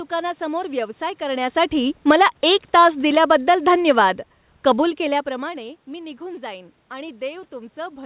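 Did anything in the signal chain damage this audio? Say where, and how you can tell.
Yes. The call processing stage shows automatic gain falling. From 1.31 s to 4.07 s the speech sinks gradually by about 6 dB. The room noise sinks with it. A talker leaning back would not pull the background down too. The gain control had judged the input too loud, or its background noise too strong.

Automatic gain rising also occurs in the call processing, inside that longer fall. Between 2.17 s and 2.55 s the speech and background swell together by about 4 dB. The controller briefly judged the input too quiet and pushed its gain back up.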